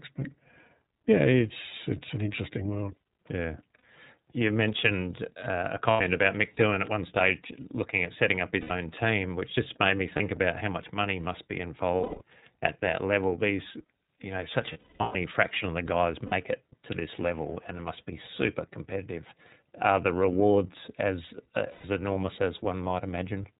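The whole recording passes through the iLBC codec: nothing above 4 kHz survives, and the speech has a plainly audible rough, synthetic edge, which fits iLBC's 30 ms frame mode.

Lost iLBC frames then cut into it at 3.79 s (60 ms), at 5.91 s after "mentioned uh a" (90 ms), at 8.61 s between "looking at setting up" and "team which just made" (90 ms), and at 10.16 s (30 ms). At 11.96 s, after "much money must be" and before "at that level", 210 ms of losses scatter over 240 ms. At 14.72 s, 360 ms of losses scatter over 420 ms, the longest run about a fifth of a second. Two more follow, at 16.26 s (60 ms) and 21.72 s (120 ms). Each gap is concealed by repeating the last pitch cycle with added noise, which sounds like a held, buzzy vowel that fades on the longer runs. The speech recovers almost immediately afterwards.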